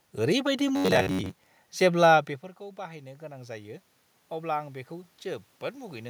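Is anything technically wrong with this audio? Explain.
Yes, there are two faults in this speech clip.

From 0.76 to 1.39 s, just before "जेब्ला बेफोरखौ", the speech turns into a rigid metallic buzz at about 93.8 Hz. This is robotic sound from repeated short buffers. Audio likely arrived too seldom, so roughly 10.7 ms chunks were replayed in place of most of the real signal.

From 2.75 to 4.83 s, after "जेब्ला बेफोरखौ", the speech and the room noise swell together by about 5 dB. This is automatic gain rising. The talker moved back around 2.0 s, dropping the input by about 17 dB, so the gain control slowly raised its level to compensate.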